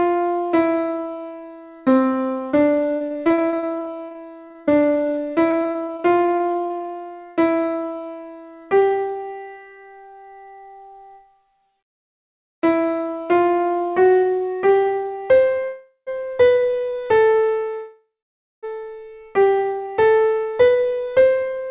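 From 2.96 to 6.90 s, repeated packet loss leaves dozens of short holes, none longer than about 43 ms, patched by stretching the preceding sound. This makes the audio choppy and robotic, with pieces missing.

At 15.64 to 16.09 s, a call audio freeze occurs, likely because delayed packets starved the jitter buffer. The last sound is drawn out as a fading buzz or hiss for about 0.43 s, with 80 ms of silence, and then the audio resumes without loss.

From 16.73 to 17.49 s, a jitter buffer slow-down repeats pitch periods to rebuild reserve, adding 68 ms. The audio plays at 92% speed at unchanged pitch and sounds drawn out.

At 17.74 to 18.65 s, a second call audio freeze, likely from another packet delay, holds the sound for about 0.89 s. That includes 550 ms of silence before playback continues where it stopped.

From 19.78 to 21.66 s, a jitter buffer speed-up trims pitch periods to shed excess delay, cutting roughly a fifth of a second. 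The audio runs at 112% speed and sounds hurried at the same pitch.

Throughout, nothing is present above 4 kHz, which fits a narrowband G.711 call path.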